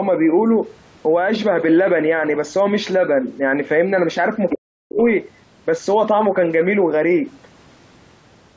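At 4.50 to 4.55 s a brief second voice surfaces under the speech, about 10 dB quieter: the other side's voice leaking through, likely because the echo canceller let some loudspeaker pickup pass. On a spectrogram it appears as faint, misaligned harmonic streaks overlapping the main talker's.

From 4.53 to 5.0 s the talker's speech sinks sharply, falling by as much as about 40 dB over roughly half a second. This is speech suppressed in double talk, likely the canceller muting both voices at once. The waveform shows a collapsed envelope, and the spectrogram, already empty above 8 kHz from the call's microphone processing, goes nearly blank.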